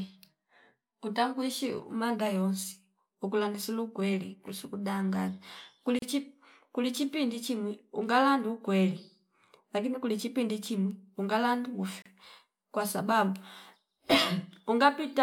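At about 5.99 s the speech drops out for roughly 33 ms, up to 6.02 s, and it happens again at 12.02 to 12.06 s for about 34 ms. That six-second spacing is the giveaway for a gap at a join of encoded pieces: each chunk was encoded on its own and butted together untrimmed, so encoder start delay and last-frame padding leave a short hole. The edges are smeared by the codec, and the speech picks up right where it left off.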